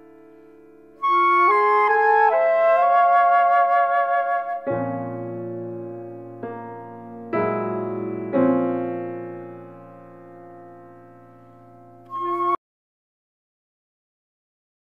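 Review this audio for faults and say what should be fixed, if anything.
At 12.55 s the audio just stops dead, and from there to the end of the clip it's silence, not even a trace of room tone underneath. That's a classic audio dropout to silence: the input was likely lost, say a device disconnecting, a link failing or a mute getting hit, while the recorder carried on writing silence. Whatever happened during those last couple of seconds is gone. Lock down cables and connections and keep an eye on input meters while recording.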